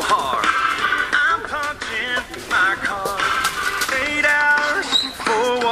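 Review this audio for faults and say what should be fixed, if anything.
Nothing here needs fixing; no faults turned up on review.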